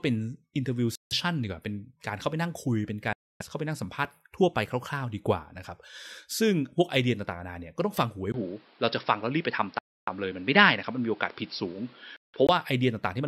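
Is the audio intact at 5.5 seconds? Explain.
Yes, at 5.5 seconds the speech plays through intact, with no fault to be heard at that moment.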